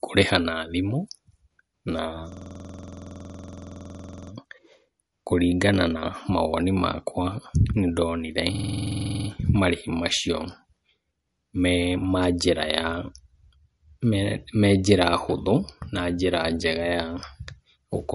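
Speech, carrying plainly audible watery, swirly codec damage with nothing above 11.2 kHz, likely MP3 compression; unlike a simple low-pass, the texture shifts from moment to moment. A system hang loop repeats one 46 ms piece exactly at 21.5 Hz from 2.32 to 4.32 s (43 repeats) and from 8.55 to 9.29 s (16 repeats), just before "marĩhi macio". This fits a 2048-sample buffer, and unlike a dropout it is identical repetition, with little or no audio missing afterward.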